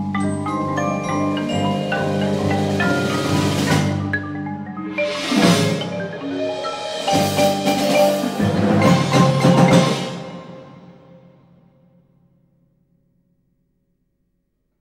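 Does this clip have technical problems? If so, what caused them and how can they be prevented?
No, nothing stood out as a technical problem on listening, so there is no cause to trace and nothing that needs preventing.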